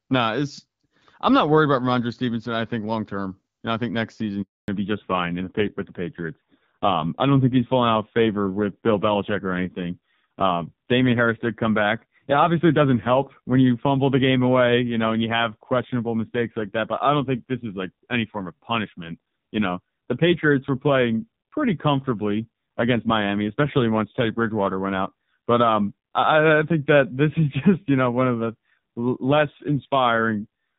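Phone-call speech with a handover gap and a fallback to narrowband. At 4.42 s the audio cuts out within a few tens of milliseconds and stays silent for 260 ms, until 4.68 s. That is the signature of the call being passed between networks while no speech frames arrive, so whatever was said in that interval is gone. Before the gap the sound has the wider bandwidth of the AMR wideband (HD Voice) codec, with only light coding damage, consistent with a rate around 12.65 kbit/s. From 4.68 s to the end the fallback to narrowband takes over: nothing remains above 4 kHz, and the voice becomes duller and rougher. This points to the call having dropped to the narrowband AMR codec, at a low rate such as 5.9 kbit/s, after the handover.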